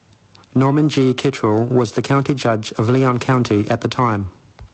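A speech clip that carries two faults from start to finish. The first is periodic clock jitter. The converter's sampling clock is being wobbled at around 1 kHz, so every component of the speech picks up sidebands roughly 1 kHz above and below it, strongest on the higher frequencies. The result is a gritty, metallic edge on voiced sound that disappears in the pauses. On a spectrogram, each harmonic band has ghost copies running parallel to it about 1 kHz away, present only while speech is. The second is gain pumping. The level is squashed, with the gain ducking by around 10 dB on loud sounds, likely because the input gain is set far too high and a fast limiter is clamping it. A waveform shows a dense, flattened envelope. The call-codec path caps the spectrum at about 8 kHz, which points to a wideband Opus setting.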